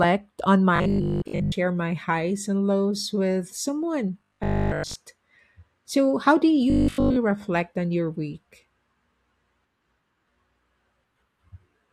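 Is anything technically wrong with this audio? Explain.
Yes. Three stretches of the speech turn robotic: 0.76 to 1.58 s, just before "my highs and lows"; 4.20 to 4.96 s, after "and lows with someone"; and 6.70 to 7.16 s, between "how do" and "reflect on your week". This is robotic sound from repeated short buffers. Audio likely arrives too seldom, so a 20 ms slice is replayed in place of new material. That happens for most of each of the first two spans and all of the third. The repetition imposes a 50 Hz buzz, a rigid metallic tone that only loosely follows the words.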